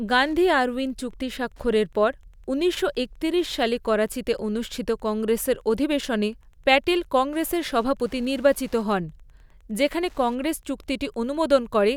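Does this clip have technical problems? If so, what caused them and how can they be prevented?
Yes. Wi-Fi interference runs through the whole speech clip as a faint, steady ticking, roughly 40 dB below the voice. The ticks repeat every 102.4 ms, the beacon interval of a nearby Wi-Fi radio. The audio circuit rectifies that radio energy into clicks. Keeping routers and phones away from microphones and cables, and using shielded leads, prevents it.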